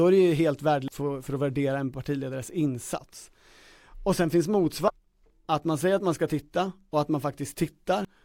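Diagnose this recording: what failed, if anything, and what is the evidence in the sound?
Damaged data in the compressed stream, at the codec, gives blips at 0.88, 4.88 and 8.05–8.08 s; the decoder misreads frames and resyncs, leaving vertical spectrogram streaks.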